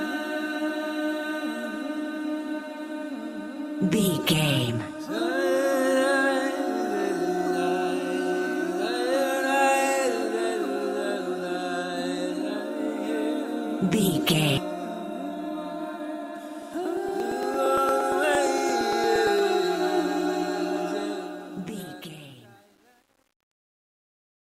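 A stream segment likely failed to load and the player moved on to the next one: at 14.57 to 14.61 s the audio jumps ahead abruptly with a small blip where the missing stretch should be. From 16.62 to 19.39 s, periodic USB or driver dropouts occur as a background task stalls the bus or audio driver every 0.115 s. Each stall skips roughly 10 ms of signal, about thirty times in all, heard as evenly spaced ticks riding on the sound. Finally, a digital fade-out beginning around 21 s passes through a stage that keeps too few bits, about 9, with no dither. That causes truncation distortion on a fade: from 20.92 s the tail gets grainy, and from 21.46 s to the end the quietest part coarsens into stepped, gritty sound.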